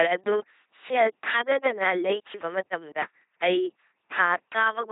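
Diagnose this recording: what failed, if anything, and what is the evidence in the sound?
Codec stage. Throughout, the speech is a buzzing robot voice cut off at 3.8 kHz: an LPC-10 vocoder driving a short filter with pulses or noise.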